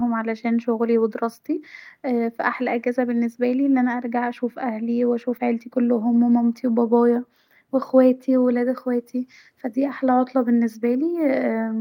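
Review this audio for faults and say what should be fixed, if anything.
No faults found; nothing needs fixing.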